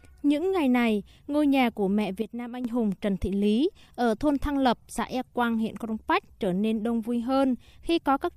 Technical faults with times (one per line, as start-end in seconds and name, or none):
2.22-2.65 sudden gain jump